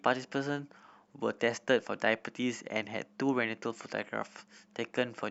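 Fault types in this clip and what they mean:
No faults can be heard anywhere in the recording.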